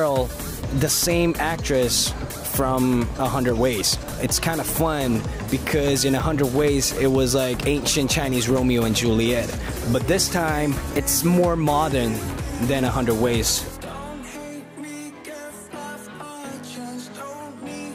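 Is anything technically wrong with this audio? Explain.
Yes. From 3.81 to 4.14 s there is processor overload crackle, a gritty tearing over the sound that stops abruptly. The processor could not finish its short audio buffers on time, and missed deadlines came in quick succession. Each miss skipped a slice of audio outright, leaving a hard-edged gap. The closely packed gaps fit buffers of about 10 ms, perhaps fifteen of them lost. A single dropout would be one clean hole, but this is a dense run of tiny skips heard as crackle.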